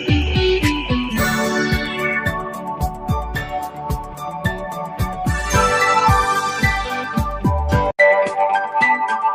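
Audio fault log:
Throughout: noise suppressor applied to music or sounds. A suppressor built for speech keeps treating steady tones, ambience and decays as noise, so its gain swings by around 10 dB. Onsets pass while sustained parts sink, which gives a pumping, thinning effect across the whole clip rather than isolated dips.
2.44–3.10 s and 3.41–5.16 s: sound cut by the noise suppressor. In these two stretches the suppressor pulls the sound down harder, by up to about 6 dB and then about 7 dB, for roughly half a second and one and a half seconds. Sustained material and tails shrink while attacks survive, unlike a plain fade.
7.91 s to end: input switched to a poorer device. After an 80 ms silence the sound returns about 5 dB quieter, with a new noise floor roughly 55 dB below the signal. It is likely a change of capture device, heard as a sudden lasting dull, boxy tone, not as a level dip.
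8.72 s: block of digital silence. A 1.33 ms stretch drops to silence with no fade, which fits a 64-sample block that arrived late. The hard edges make a brief tick, not a hole, and the tone stays the same on either side, unlike the device switch.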